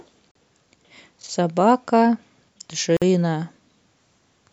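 Two gaps at joins of encoded pieces: at 0.31 s a 40 ms silence, then at 2.97 s a 50 ms one. Separately encoded chunks kept their padding, so the speech drops out abruptly, slightly smeared, then resumes where it left off.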